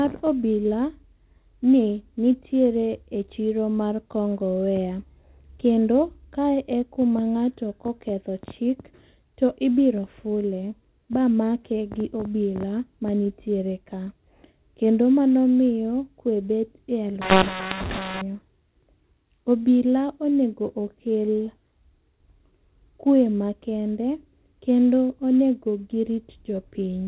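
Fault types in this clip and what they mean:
mu-law and A-law mixed up: the mu-law speech gets read as A-law from 17.22 to 18.22 s, so levels scramble and it turns harsh, gritty and noisy.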